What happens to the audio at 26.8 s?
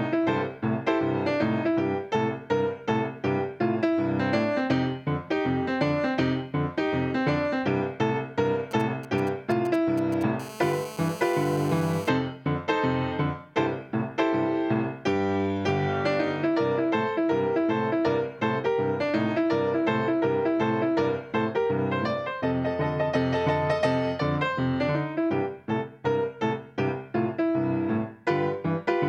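Nothing goes wrong at 26.8 s; the audio there plays through intact, with no dropout, click, distortion or other fault.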